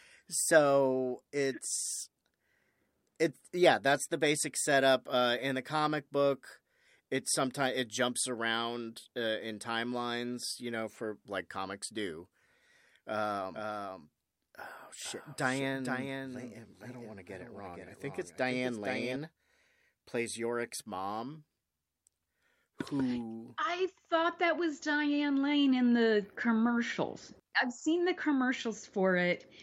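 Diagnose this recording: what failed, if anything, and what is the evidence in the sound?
A doubled audio track runs from 13.54 s to 19.16 s. Across that span the speech is heard twice, with a second full-band copy trailing the original by roughly half a second and sitting about 5 dB lower. It carries no decay or room colour, and it cuts in and out abruptly at both ends. The likely cause is the signal being captured a second time through a slower routing path, or an edit leaving two misaligned copies.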